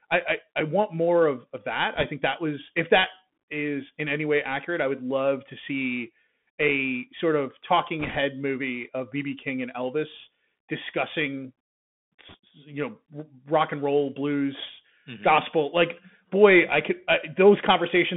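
Across the whole speech clip the sound is boxed in and narrow, with scratchy s sounds, smeared loud high peaks and a granular hiss beneath. This is the Bluetooth CVSD headset codec. The line passes only about 150 Hz to 3.5 kHz, and the rate fits a 64 kbps link. Its one-bit up-or-down steps cannot track fast high content.

Brief bursts of rushing, crackly noise, with no sharp clicks, appear at 1.95–2.06 s, 8.00–8.18 s and 12.29–12.36 s. These are bit errors on a Bluetooth voice link. The error rate is around 1.5%, then a heavier 3% in the middle burst, then 2%. Each flipped bit nudges the waveform by an amount that grows with the speech level, and the error fades, so the damage is a wash of noise rather than loud pops.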